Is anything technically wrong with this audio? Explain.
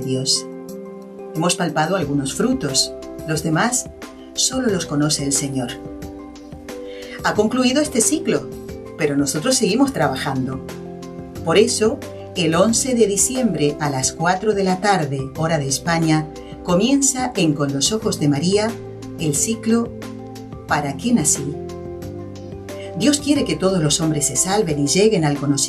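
No, nothing technically wrong stood out on listening to this audio.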